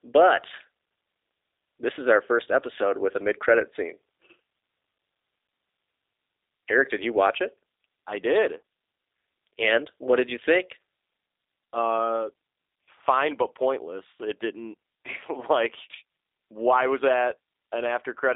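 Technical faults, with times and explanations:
Throughout, G.729 codec: the whole thing has that squeezed VoIP-line sound, with nothing above about 3.7 kHz and the low end thinning out below roughly 300 Hz. The codec doesn't send the waveform. It rebuilds the speech from a vocal tract filter model, a pitch predictor and a handful of pulses per 10 ms frame, so vowels come out slightly rough and synthetic. That's plainly audible here and fits an 8 kbit/s G.729A link.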